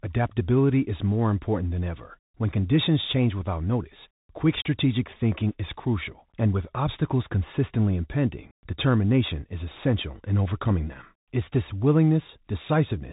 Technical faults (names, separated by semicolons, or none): Bluetooth CVSD headset codec